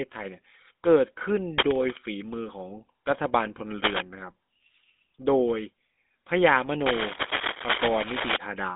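From the start, the speech carries GSM full-rate codec damage. The codec rebuilds the voice from a vocal-tract model fed by a sparse pulse excitation. That coarse excitation gives a buzzy, gravelly roughness that is plainly audible. Nothing reaches above 3.8 kHz, and the line band runs from about 200 Hz to 3.6 kHz. The result is thin and muffled, and it fits a 13 kbps GSM full-rate path.

At 1.58 s, cable scratch noise breaks in and lasts until 1.97 s. Dense, uneven bursts of rustling sit over the speech, roughly as loud as the speech itself. It returns at 6.86 s and runs longer, until 8.37 s. The likely cause is a worn cable, connector or control being moved. Its contact resistance jumps around rapidly, and each jump adds a burst of scratchy noise.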